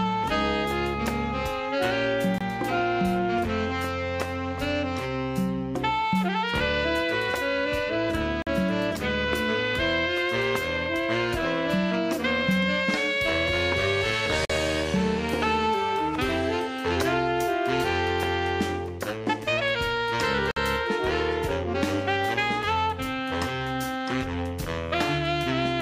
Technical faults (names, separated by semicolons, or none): gap between stream segments